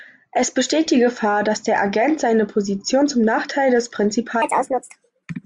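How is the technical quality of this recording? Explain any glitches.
The recording has one glitch, near the end. From 4.42 s to the end, a section at the wrong speed plays 1.44 times too fast, likely from a clock mismatch. Speech turns hurried and roughly seven semitones higher. Unlike a pure pitch shift, pace and pitch jump together.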